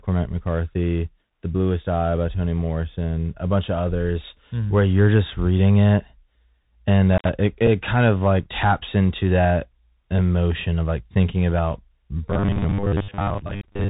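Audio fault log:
throughout, Bluetooth CVSD headset codec: scratchy s sounds, granular hiss and no content above 4 kHz; the 64 kbps one-bit delta coding narrows the band and distorts loud high peaks.
7.13 to 7.30 s, intermittent contact: a crackle, then a dropout of about 76 ms with faint hiss, then another crackle as a loose connection opens and closes.
7.67 s, Bluetooth headset packet repeated: a single small tick just before "kind of like taps", from one lost 3.75 ms voice packet whose bits were decoded again.
12.28 to 13.89 s, robotic sound from repeated short buffers: after "of like thinking about", a rigid metallic 100 Hz buzz to the end, likely from 10 ms buffers replayed, with about half the audio repeated.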